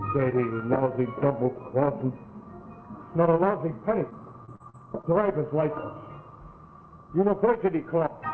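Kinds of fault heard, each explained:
Repeated packet loss (robotic sound): from 4.10 to 5.05 s, five short gaps, the longest 42 ms, are patched by stretching prior sound, giving choppy texture; spectrogram shows smeared, repeated blocks.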